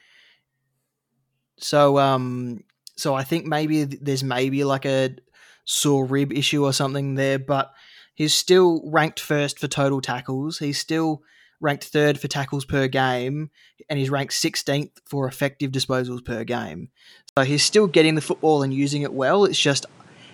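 At 17.29 s, right after "effective disposals per game", the speech drops out for a brief 80 ms gap and comes back duller and narrower, with nothing above 11.4 kHz and a new background noise sitting roughly 30 dB below the speech, while the loudness stays about the same through to the end at 20.34 s. The likely cause is an input switched to a poorer device mid-recording, another microphone or a headset's call profile with a narrower band and its own noise floor.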